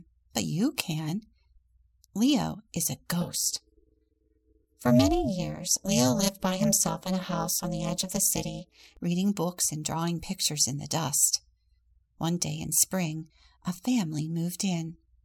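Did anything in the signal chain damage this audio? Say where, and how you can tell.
Yes: frame-based processing resynthesised the speech with mismatched window overlap, causing overlap-add ripple from 3.21 to 8.97 s, a metallic buzz around 400 Hz, about 60 dB deep.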